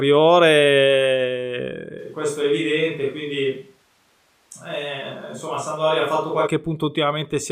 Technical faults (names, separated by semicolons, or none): switch to a distant microphone